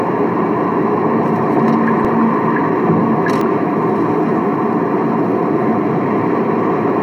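At 2.05 s and again at 3.41 s the sound jumps, skipping roughly 15 ms and then about 5 ms. Each is likely a dropped buffer (overrun), with the lost stretch spliced shut. Unlike a dropout, no silent gap is left.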